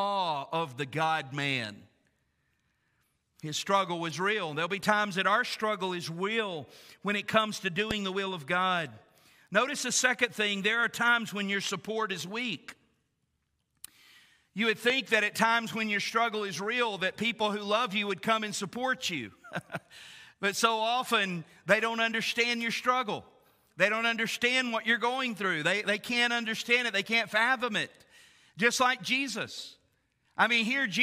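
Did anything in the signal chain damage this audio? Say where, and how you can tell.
Yes. Two loud pops stand out, one from 7.91 to 7.93 s and another from 14.90 to 14.92 s. Each is a single sharp crack peaking about 15 dB above the surrounding sound, which carries on underneath without interruption. The likely cause is in the analogue wiring or switching stage. A sudden voltage step, from a plug, switch contact or static discharge, was added to the signal, and the following circuitry shaped it into a brief, hard transient.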